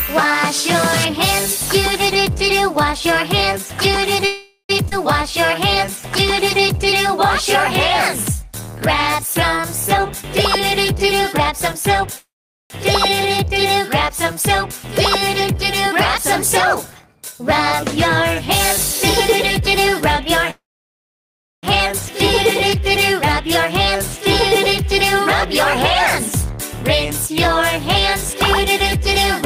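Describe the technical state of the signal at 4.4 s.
At 4.4 s the signal is inside a call audio freeze running from 4.25 to 4.71 s. The likely cause is packets stalling in transit until the jitter buffer ran dry. The receiver filled about 0.44 s by extending the last sound into a fading buzz or hiss, with roughly 80 ms of silence at the end. The audio then picks up exactly where it stopped, so nothing is lost, but everything after it arrives about 0.44 s later.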